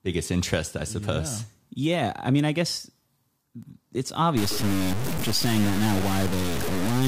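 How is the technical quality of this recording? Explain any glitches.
The recording degrades sharply in its final stretch. From 4.37 s to the end, the speech turns harsh and gritty, with distortion nearly as loud as the voice itself. The likely cause is low bit depth without dither: truncation to 4 bits rounds every sample onto coarse steps, so the error follows the speech. The waveform shows blocky staircase steps, and the spectrogram fills with broadband grain that rises and falls with each syllable.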